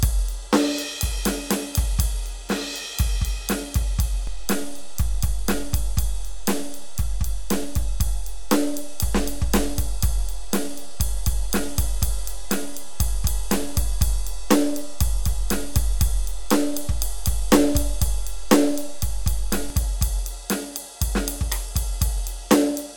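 At 4.27 s the music's zero line jumps in a DC step of about -24 dBFS, heard as a low thump while the music carries on unchanged. The offset holds until 19.70 s, where it steps back with a second thump.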